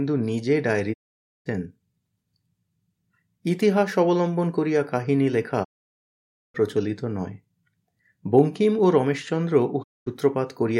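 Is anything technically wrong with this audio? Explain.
Yes. The speech has three digital broadcast dropouts, at 0.92 to 1.48 s, 5.63 to 6.56 s and 9.82 to 10.08 s. The receiver lost good frames and muted, fading out over 20 ms, leaving clean silent holes where the sent audio is gone.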